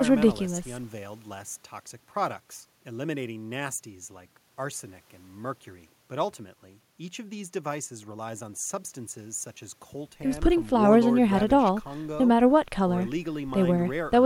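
A speech recording with nothing technically wrong with it.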